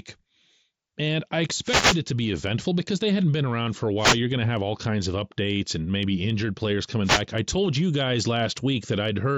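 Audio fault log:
1.63–2.01 s, 3.97–4.20 s, 7.03–7.23 s: wireless microphone noise hit. Each is a brief burst of static and hiss: before "it to be eventful", between "for a" and "going to have all", and after "and maybe injured players". The FM radio signal fades as reflections cancel, so receiver noise rises over the voice. Unlike a digital dropout, the sound fills with noise instead of going silent or glitching.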